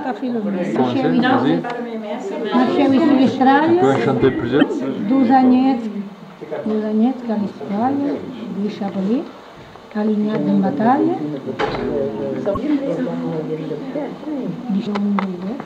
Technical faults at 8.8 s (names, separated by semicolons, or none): none